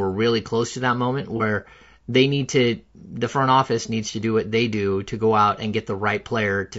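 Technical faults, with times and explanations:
throughout: low-delay AAC compression. The speech has a plainly audible rough, grainy texture, with noise filling the gaps between pitch harmonics and a top band that sounds thinned and somewhat synthetic. The likely cause is a low-delay codec such as AAC-ELD, whose short frames give coarse frequency resolution, so harmonics are poorly separated and bits run short. The degree of damage fits a rate of roughly 32 kbps.
1.37–1.42 s: AAC frame loss with concealment. Right after "close to that moment" there is a brief smeared, noisy patch lasting about 30 ms, consistent with a single missing frame. The decoder rebuilt that stretch from the preceding spectrum rather than from real data. Because the patch is so short, the substitute is a momentary blur with no drop to silence or fade back in.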